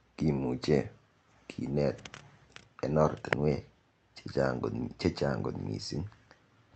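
No faults found in the speech, which carries only the expected band limit of the call path, with nothing heard above about 8 kHz.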